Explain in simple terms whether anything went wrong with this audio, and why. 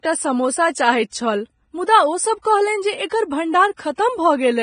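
The speech sounds hissy and grainy throughout, with dull treble and nothing above 9.7 kHz, which points to heavy Vorbis compression as the likely cause.

At 2.42 to 2.45 s, a brief hiss comes just before a sharp sound. This is pre-echo: the codec's noise spreads about 29 ms ahead of the attack.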